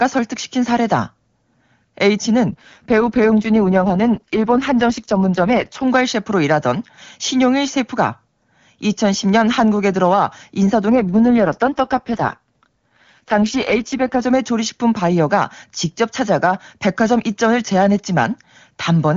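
Speech carried over AMR-WB, and it goes rough and synthetic twice, from 2.50 to 5.86 s and again from 10.91 to 14.22 s. That's an AMR rate drop: the sound points to a fall from 23.85 to 6.6 kbit/s on a weak link, keeping the same band with no gap.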